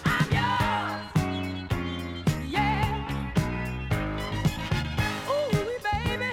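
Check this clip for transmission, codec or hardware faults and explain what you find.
Nothing here points to a transmission, codec or hardware problem, so there's nothing to flag in this one.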